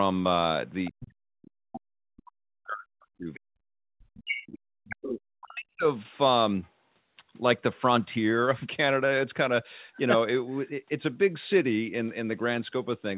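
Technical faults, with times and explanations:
0.85–0.91 s, 4.29–4.59 s, 4.84–5.09 s and 6.63–6.70 s, other side's voice leaking through: a second voice comes through in short scraps. It is about 20 dB below the main talker at first, rises to only about 5 dB below at 4.29 s and about 10 dB below at 4.84 s, then fades to a faint trace roughly 40 dB down at 6.63 s. The likely cause is loudspeaker playback of the far end reaching the microphone, with the echo canceller leaving part of it behind.
0.91–4.44 s and 4.87–5.85 s, speech suppressed in double talk: the talker's level sinks and breaks up, dropping by as much as about 40 dB, for roughly three seconds in the first stretch and about one second in the second. Each stretch begins right as the leaked far-end voice appears, so both sides are sounding at once. The likely cause is the echo canceller failing to separate the talker from the echo and turning the whole signal down. 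The speech passes through a narrow telephone-band channel limited to 4 kHz.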